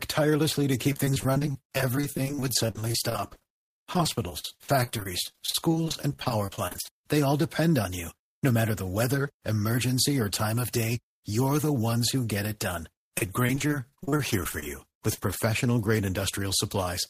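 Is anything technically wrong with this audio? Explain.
Yes. From 0.92 to 7.0 s, ending just before "they all depend on", and from 13.18 to 15.37 s, right after "who get it done", there is repeated packet loss (robotic sound). Audio packets kept dropping, and each gap of up to about 50 ms was covered by stretching the preceding sound. Roughly a quarter of each stretch is filled this way, making the speech choppy, with pieces missing.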